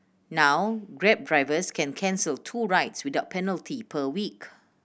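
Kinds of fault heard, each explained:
No kinds of fault are heard in this clip.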